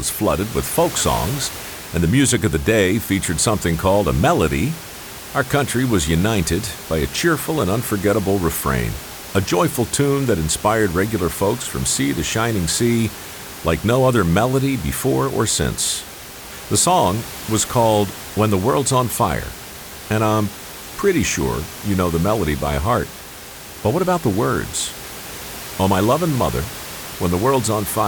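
Nothing goes wrong anywhere in this speech recording; the only thing under it is the room's own background noise, sitting about 15 dB below the talking.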